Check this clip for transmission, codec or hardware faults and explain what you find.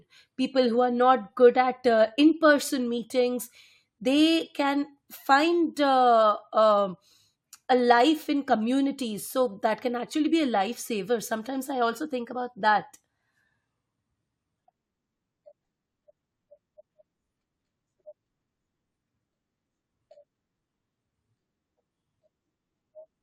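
Nothing in this speech recording points to a transmission, codec or hardware problem, so there is no fault to report.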